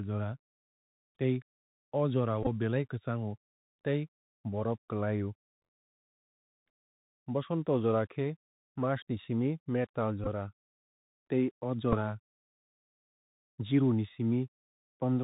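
Throughout the speech, the Bluetooth CVSD headset codec is plainly audible. Nothing passes above 4 kHz, s sounds come out scratchy, and a granular hiss lies beneath. The one-bit up-or-down tracking, which fits a 64 kbit/s CVSD link, can't keep pace with loud high sounds. That hiss and slope distortion, rather than watery or smeared artefacts, mark it apart from wideband or transform codecs.

From 2.43 to 2.48 s, a Bluetooth headset packet repeated fault occurs. About 30 ms of lost audio is scattered over 37.5 ms, and the longest run is around 15 ms. Each gap is filled by decoding the previous packet's bits again, giving a short buzz near 267 Hz. A similar burst follows at 10.24 to 10.28 s, and a brief 7.5 ms repeat at 11.92 to 11.94 s. Unlike a plain dropout, these gaps buzz rather than fall silent.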